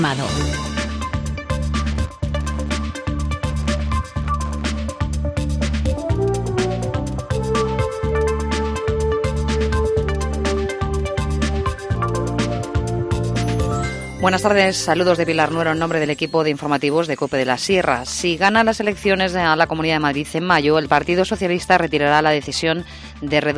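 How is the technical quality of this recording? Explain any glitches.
No glitches turn up anywhere in this recording. There are no dropouts, clicks, distortion or other technical faults to explain.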